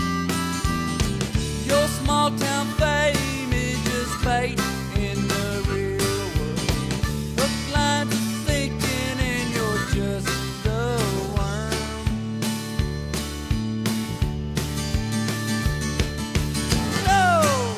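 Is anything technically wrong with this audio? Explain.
No, nothing technically wrong is audible anywhere in this recording.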